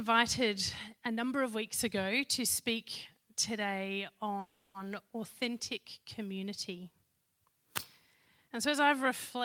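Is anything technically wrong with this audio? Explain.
Yes. A call audio freeze runs from 4.39 to 4.76 s: the last sound is stretched into a fading buzz for about 350 ms, likely a jitter-buffer underrun. Nothing is lost, and playback resumes about 350 ms later.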